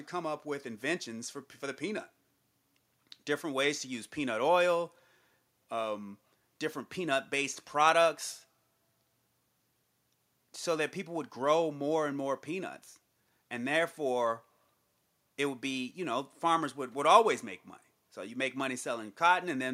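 No technical faults can be heard anywhere in this speech recording. Nothing in the signal path calls for comment at any point.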